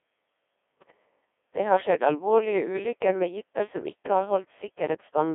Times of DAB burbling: none

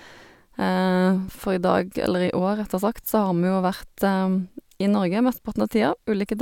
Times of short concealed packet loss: none

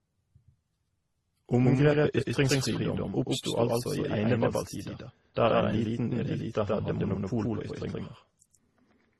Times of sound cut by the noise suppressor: none

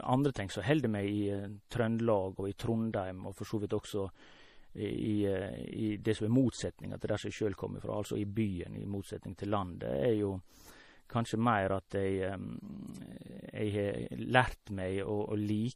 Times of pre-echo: 0.34, 1.69-1.71, 11.90

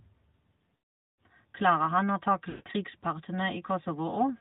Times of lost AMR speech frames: 0.76-1.28, 2.50-2.69

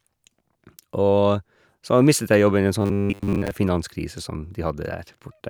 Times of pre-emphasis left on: none

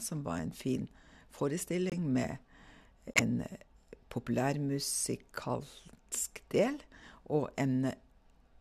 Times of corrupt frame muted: 1.90-1.94, 3.14-3.21

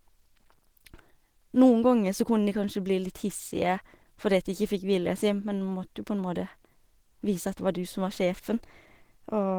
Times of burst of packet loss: none

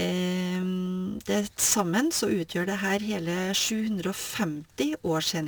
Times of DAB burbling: none

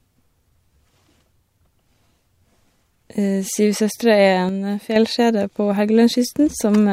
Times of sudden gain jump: 4.49-4.96

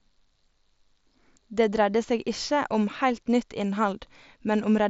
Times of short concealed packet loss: none

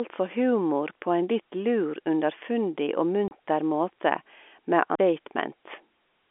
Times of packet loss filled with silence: 3.28-3.31

